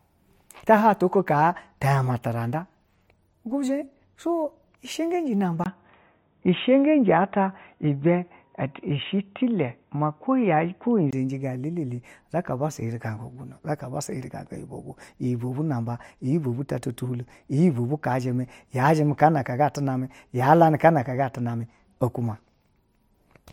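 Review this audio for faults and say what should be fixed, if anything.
From 5.64 s to 11.13 s the speech suddenly turns dull and boxy, with nothing above 3.8 kHz, a level shift of roughly 5 dB, and faint new background noise well under the voice. A short gap of about 20 ms marks the cut. That's most likely the input switched to a poorer device, such as a headset dropping into its narrowband call profile, before the original mic came back. To prevent it, lock the recording input to one device and turn off automatic switching.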